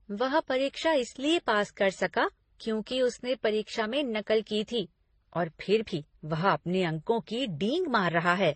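From start to finish the speech sounds dull, with nothing above 9 kHz, and the different artefacts of more than one codec are layered together, as if two kinds of damage are heard at once. The likely cause is transcoding between lossy codecs: the sound points to a low-rate MP3 followed by HE-AAC and then another MP3, each encoder spending bits on the previous artefacts while adding its own. The lowest cut-off in that chain has remained.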